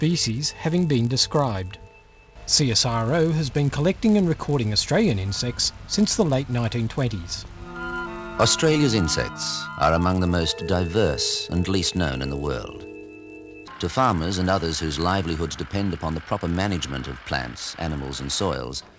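A steady 100 Hz buzz rides along with the audio for the whole clip, sitting under the signal and dropping out wherever things go quiet. That's the classic signature of a resampler restarted on every block. Each 10 ms chunk got converted in isolation, most likely on a step down from 44.1 kHz to 16 kHz, so the filter had no real neighbouring samples at the edges. The small error left at each boundary repeats at the block rate and turns into that buzz.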